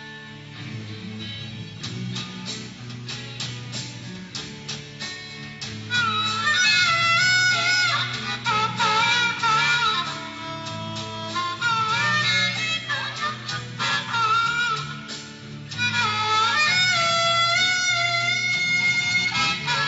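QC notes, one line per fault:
No faults heard anywhere in the clip.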